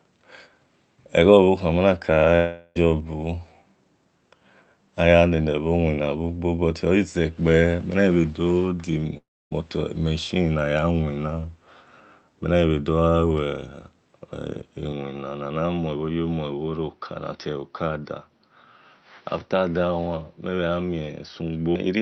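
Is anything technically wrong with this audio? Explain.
Yes. The speech has two gaps, at 2.35 to 2.77 s and at 9.17 to 9.53 s. Each is likely a long network dropout. About 0.4 s and 0.34 s of audio never arrived. The receiver stretched the last sound into a fading buzz. The second gap ends in near silence before the speech resumes.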